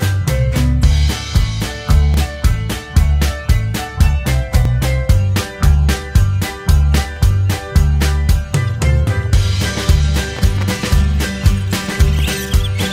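Overlapping chunks cause brief stutters at 2.14, 4.65, 7.17, 9.68 and 12.19 s. The audio was handled in 2.5 s blocks, each beginning 12 ms before the previous one ended, so that sliver plays twice at every join and is heard as a regular click.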